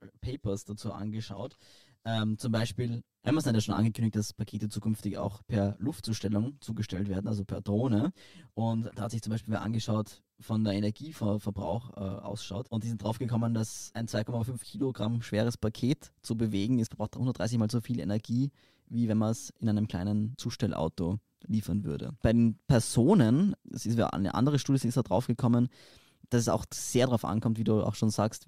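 From the start to 15.21 s the speech has channel delay (comb filtering). One channel arrives roughly 10 ms behind the other, and when the two are summed to mono the shared content cancels at regularly spaced frequencies, the first notch sitting near 50 Hz with further notches stacked evenly above it. The result is a hollow, phasey coloration that stays fixed across the whole span, giving the speech a tubular quality.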